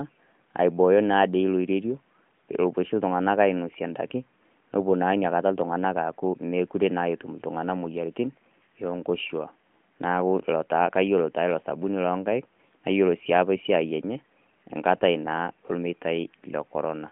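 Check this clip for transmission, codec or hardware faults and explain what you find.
Nothing stood out on listening to this speech clip that would point to a transmission, codec or hardware problem.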